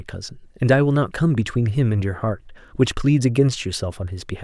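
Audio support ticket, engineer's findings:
No audible faults found in this speech clip.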